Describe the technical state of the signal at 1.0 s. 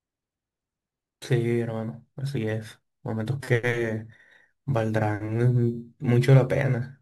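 At 1.0 s the speech carries a crude rate conversion, as it does through the whole clip: the resampling was done by simply keeping the nearest sample, dropping some, with no filtering, in a pattern that fits a change from 48 kHz to 44.1 kHz. That timing error produces shifted, inharmonic copies of the speech, roughly 35 dB below it, heard as a gritty, inharmonic fizz that rides on louder and brighter sounds.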